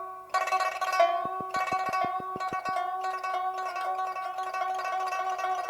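Something outside the audio itself, likely electrical interference or a faulty connection or power supply, injects a burst of pulses from 1.25 s to 2.70 s. This train of clicks arrives at an even pace of about 6.3 per second, roughly ten clicks in all, each with much the same shape. They stand well above the sound, peaking at about 10 dB over it, and are heard as a steady ticking laid over the audio.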